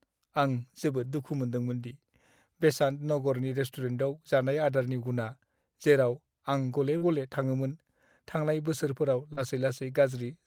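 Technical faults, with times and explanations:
0.99–1.21 s, lost packet rebuilt from error correction: lost packets were replaced by lower-bitrate copies from the following packets, so about 120 ms of speech plays rougher and noisier, with no gap.
4.79–4.85 s, lost packet rebuilt from error correction: missing audio was decoded from redundant copies carried in later packets, leaving about 40 ms of coarser, grainier speech instead of silence.
6.97–7.03 s, short concealed packet loss: about 40 ms arrived too late, so the decoder extended the preceding sound for about 35 ms before blending back, a brief smear just before "थाङोमोन थांनाय बोसोरफोराव".
7.01–7.07 s, lost packet rebuilt from error correction: overlapping that concealment, about 40 ms was rebuilt from low-bitrate backup copies, so the roughness continues slightly past the smear.
9.33–9.39 s, short concealed packet loss: after "थाङोमोन थांनाय बोसोरफोराव", about 40 ms never arrived in time and was filled by continuing the previous sound, giving a short wobble.
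9.37–9.47 s, lost packet rebuilt from error correction: overlapping that concealment, about 60 ms was decoded from redundant lower-quality copies, so the speech sounds noisier and rougher without dropping out.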